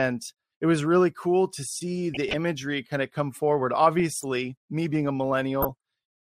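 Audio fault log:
2.14–2.36 s, 4.00–4.24 s and 5.61–5.73 s: DAB burbling. Three short bursts of burbling sit over the speech as weak reception lets bit errors slip past error correction into the MP2 data. Corrupted samples put short blips of noise in single sub-bands, and corrupted scale factors make sub-bands jump in level for up to a frame; the burst at 5.61 s has the highest error rate, roughly half a percent.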